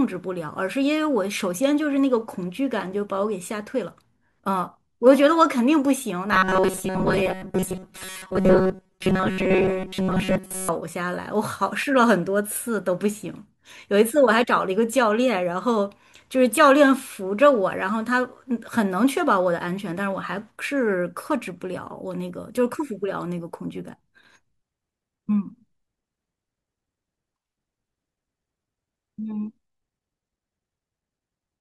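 A speech clip in which, from 6.32 to 10.69 s, the voice hardens into a rigid metallic buzz at about 188 Hz. This is robotic sound from repeated short buffers, likely caused by audio arriving too seldom, so most of it is replaced by repeats of a buffer about 5.3 ms long.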